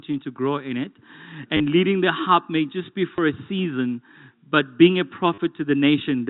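At 1.57 to 1.6 s, 3.16 to 3.18 s and 5.34 to 5.38 s there's packet loss with the last packet repeated, gaps of 30, 20 and 40 ms. Each one is a quick robotic stutter, buzzing at about 100 Hz, which fits 10 ms packets, over band-limited G.711 telephone audio.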